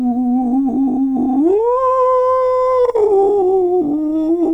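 No technical faults are audible anywhere in this music.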